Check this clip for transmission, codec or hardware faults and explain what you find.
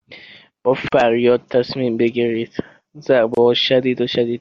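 Two faults are present: coding damage across the whole speech clip and two brief silences where separately encoded pieces were joined.

Throughout, the speech sounds watery and swirly, s sounds chirp metallically, and consonant attacks smear. This is likely MP3 compression, with damage plain enough to fit a low bitrate around 64 kbps. The encoder spends its limited bits only on frequency lines its hearing model rates as important. It cuts the top band and zeroes weak lines, which flicker on and off from frame to frame. That flickering is what separates it from a simple low-pass filter, which would dull the sound evenly without any swirl.

From 0.88 to 0.92 s, a 40 ms silence cuts into continuous speech, and from 3.35 to 3.37 s a second one of about 27 ms does the same. These are gaps at a join of encoded pieces. Each encoder run added its start-up delay and padded its final frame, and that silence was kept when the pieces were joined. 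The edges are smeared by the codec, and speech resumes exactly where it stopped. Nothing is missing, which sets this apart from a packet-loss dropout.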